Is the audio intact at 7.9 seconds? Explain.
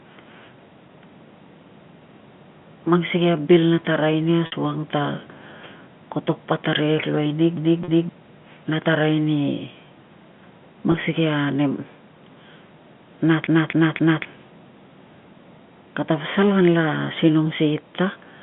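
No. Just after "luai nig", from 7.57 to 8.09 s, the same 0.26 s of audio plays twice in a fast, even stutter with a brief mute at each jump. This is a CD stuck on one turn: a scratch throws the laser back one track every revolution.

Inside that stutter, from 7.84 to 7.88 s, a 40 ms gap sounds like a slightly held, buzzy tone. This is packet loss with pitch repetition: the receiver filled the missing stretch, which fits two 20 ms packets, by repeating the last pitch period.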